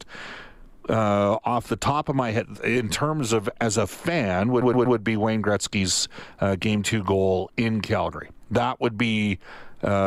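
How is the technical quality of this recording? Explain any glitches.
The recording has one glitch, a stutter partway through.

Repeated frames, 4.61 to 4.97 s, right after "of as a fan": a 120 ms stretch of the compressed stream was sent or stored more than once, so the decoder played the same slice three extra times. That block length fits a run of about six codec frames. You hear a quick stuttering loop. The speech is stretched by 360 ms.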